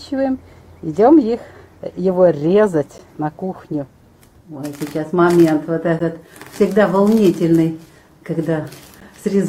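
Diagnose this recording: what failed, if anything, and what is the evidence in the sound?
Gap between chunks at 2.98, 5.99 and 9.00 s: three 12 ms holes, spaced 3.0 s apart. This is a storage or playback fault. The audio was handled in 3-second chunks, and silence was left at each join. No sound is lost, but it is interrupted.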